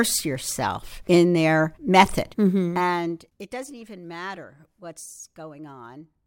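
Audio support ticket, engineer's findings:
Zipper noise 2.45–3.50 s, after "yourself in their method": gain drop of about 15 dB applied in unsmoothed steps, roughly 30 per second, each step clicking. Probable gain stage lacking per-sample ramping.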